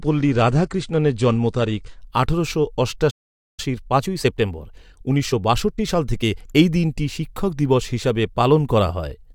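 For the first 2.0 s the speech comes through an adaptive stream starting at a low bitrate. The treble is missing, the top end sounds dull, and coding artefacts are more prominent. The character fits a low-rate AAC-LC rendition of around 32 kbit/s. At 2.0 s the quality rises abruptly, with no gap, to a fuller sound consistent with a step up to about 96 kbit/s once the player had gauged the connection.

At 3.10 s a playback stall cuts the speech off mid-flow. The output stays silent for about 0.48 s, until 3.60 s. The likely cause is the player's buffer running dry, or its output thread being held up, so it had nothing to send until data arrived again.

From 3.60 s, just before "এই দিনটি শিক্ষক দিবস", to 6.60 s the player works off the backlog from the stall with time-compressed catch-up. It removes short slices of audio and cross-fades across the joins, so the speech runs about 1.15 times faster while the pitch stays put. 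The result sounds hurried. Normal pace returns at 6.60 s.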